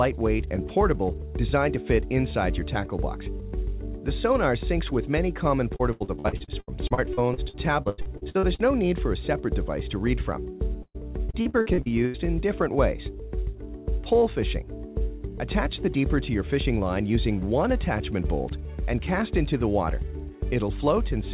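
From 5.76 to 8.62 s there's a run of repeated packet loss, that robotic sound: a couple dozen short holes, the longest about 88 ms, each papered over by stretching the last bit of audio, so roughly a third of that span is concealment and it comes out choppy. It happens again from 10.83 to 12.17 s with fewer but longer gaps, up to 117 ms. All of it sits inside the call's narrow band, which stops at 4 kHz.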